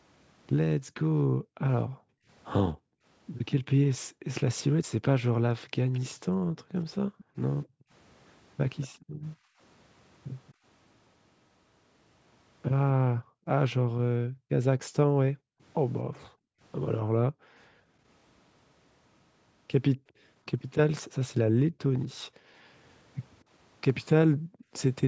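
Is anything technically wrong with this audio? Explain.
Yes, there are two faults in this speech recording.

Background gated by the echo canceller, from 0.78 to 9.59 s, 12.93 to 18.04 s, 20.02 to 22.7 s and 24.33 to 24.73 s. While far-end audio played from the loudspeaker, the canceller clamped the microphone down, cutting the room sound by up to about 40 dB. The ambience drops out, adding up to roughly three seconds in each of the first two windows, about a second in the third and under half a second at the end, then snaps back when the canceller releases.

Echo leak, from 5.94 to 7.22 s and again from 8.81 to 10.53 s. A faint second copy of the speech trails the original by 227 ms, roughly 20 to 25 dB down and a little louder in the later stretch. This is likely the far side's echo canceller failing to remove all of its loudspeaker output picked up by its microphone, so the residue was sent back down the line. 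The lack of content above 8 kHz comes from the call's microphone processing and is not a fault.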